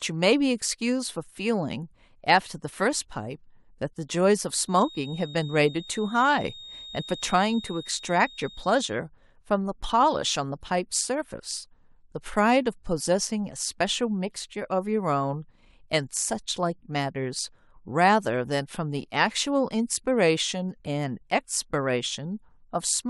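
A loudspeaker-to-microphone loop likely sat right at the edge of feedback from 4.62 to 8.98 s, sustaining a single 3.7 kHz tone: a feedback whistle, thin and steady behind the speech, around 20 dB below it, swelling and fading slowly in level.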